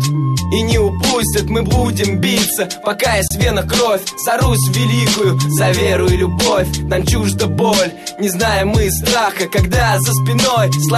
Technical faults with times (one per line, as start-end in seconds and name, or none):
3.28-3.30 gap at a join of encoded pieces